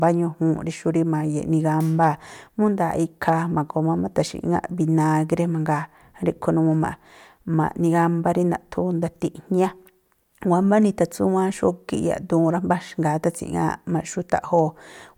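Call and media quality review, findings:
Hard clipping in the speech at 0.03 s, 3.28 s, and 14.35–14.59 s: brief crackle on peaks driven about 1 dB, about 2 dB and about 0 dB past full scale. The waveform shows flat-topped peaks, and the spectrogram shows vertical streaks of high harmonics.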